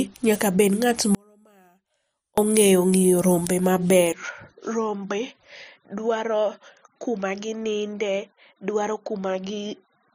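At 1.15 s the speech drops out abruptly. For 1.23 s, until 2.38 s, only a faint residue remains, far below normal level. This audio dropout to a faint residue is likely a brief loss of the signal while the path stayed live.

From 4.13 s the sound turns dull and boxy, with nothing above 6.6 kHz. The level falls by roughly 10 dB. No silence marks the change. This points to a likely input switched to a poorer device, narrower and quieter.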